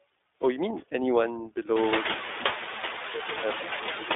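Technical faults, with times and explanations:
throughout: noise suppressor artifacts. Background noise dips between phrases and swells under speech; the suppressor pulls steady noise down by about 17 dB, frame by frame.
throughout: iLBC codec. Speech sounds boxed-in, slightly rough and synthetic, band-limited to 300 Hz–3.6 kHz; this fits iLBC's 15.2 kbps mode coding each 20 ms frame independently.
2.29–3.65 s: loudspeaker feedback squeal. A steady 4 kHz tone swells over roughly a third of a second to around 15 dB above speech, as loudspeaker-to-microphone loop gain exceeds one.
3.18–3.21 s: lost iLBC frames. A brief 20 ms buzzy, held-vowel smear; the decoder repeats the last pitch cycle with noise, then recovers immediately since frames stand alone.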